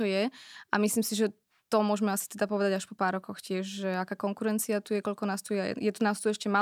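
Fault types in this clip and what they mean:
No faults found; the speech signal shows no defects to report.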